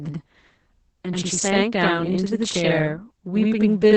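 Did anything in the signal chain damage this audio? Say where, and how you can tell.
Yes. A buffer or driver stage has delayed one channel by about 85 ms, which fits a 2048-sample buffer. After summing to mono, this channel delay produces doubling. A second copy of the speech trails the first at equal level throughout, like a slap echo.

The codec stage adds Opus voice compression. The sound suggests SILK mode at about 10 kbps, with the band cut to wideband, near 8 kHz. Damage is heavy throughout. The speech sounds muffled, hoarse and slightly robotic, because the excitation is coded coarsely in 20 ms frames.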